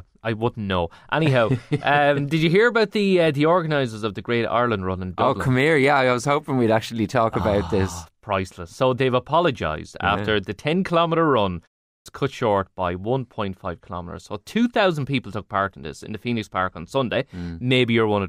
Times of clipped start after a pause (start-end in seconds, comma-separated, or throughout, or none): 11.96-12.06